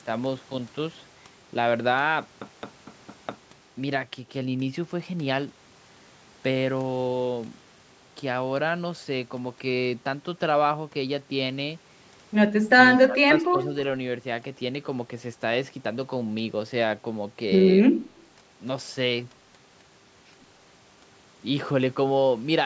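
A CD stuck on one turn runs from 2.40 to 3.50 s. A damaged spot on the disc keeps throwing the laser back one track, so the same 0.22 s slice of speech replays five times in a row. Each jump backward leaves a brief mute, and the result is the quick, evenly spaced stutter of a skipping disc rather than a natural hesitation.

An echo leak appears at 12.91 to 12.99 s. A faint copy of the speech trails the original by 105 ms, sitting about 15 dB below it. This is likely an echo canceller on a loudspeaker-equipped end that failed to scrub out all the sound its microphone picked up, so a fragment of that sound was returned down the line as a short, ghostly repeat.

Speech suppressed in double talk follows from 13.06 to 13.53 s. The level dips in patches totalling about a fifth of a second, falling by roughly 15 dB at the deepest point. The likely cause is the echo canceller meeting simultaneous talk from both ends, failing to separate its own talker from returning echo, and turning everything down. 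Within the call's band, which stops at 8 kHz, those moments drop noticeably in level.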